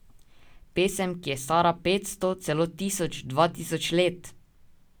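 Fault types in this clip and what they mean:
The speech signal shows no audible technical fault, with steady level and continuous playback and no dropouts, distortion or added noise at any point.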